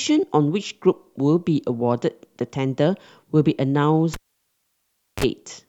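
At 4.14 s the speech is cut by a sharp pop and drops to near silence for about 1.05 s. Just before it returns, a short burst of 50 Hz mains buzz lasting about 39 ms comes through, then a second pop at 5.24 s brings the signal back. This is a cable pulled and plugged in while live. The pops come from the contacts breaking and remaking. The buzz is the moment only the plug tip touches, picking up hum without a ground.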